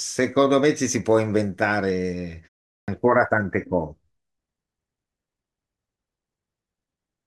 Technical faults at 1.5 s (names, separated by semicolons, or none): none